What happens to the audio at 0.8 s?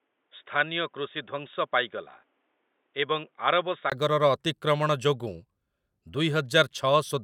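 At 0.8 s the speech is dull and narrowband, with nothing above 3.8 kHz, a few dB quieter, and a faint noise floor. This lasts from 0.0 to 3.92 s and likely comes from the input being switched to a poorer device. A brief 20 ms gap marks the switch back.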